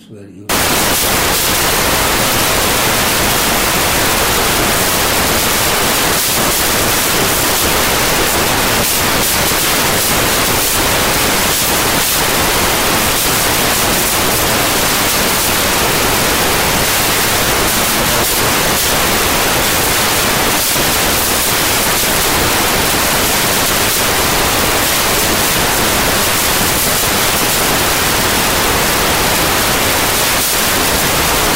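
From 0.49 s to the end, samples built from the wrong bytes: low bits land on top, so everything turns into loud hiss.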